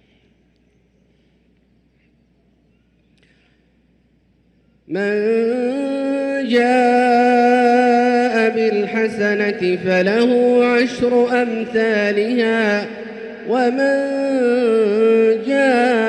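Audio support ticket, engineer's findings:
No faults found on the signal path: level, continuity and timing all hold steady throughout, with nothing audible that points to a failing component.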